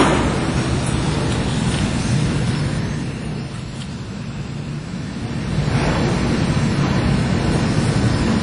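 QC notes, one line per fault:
throughout: WMA compression, likely a low-bitrate transform encode, around 32 kbps, with long blocks. Quantisation noise smears across tens of milliseconds, so the sound rings and turns washy, with hiss that swells and recedes with the signal. Nothing remains above 10.1 kHz.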